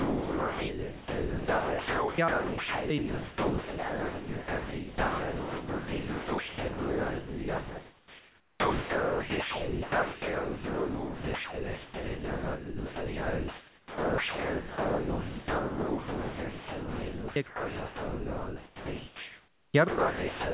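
Sound dropped by the voice detector runs through this speech clip, heard over a call path limited to 4 kHz, at 0 to 2.18 s, 2.28 to 2.9 s, 2.98 to 17.36 s, 17.46 to 19.74 s and 19.88 s to the end. In each span the speech gives way to steady comfort noise, likely because the sender's voice detector judged the quiet speech to be background and stopped transmitting.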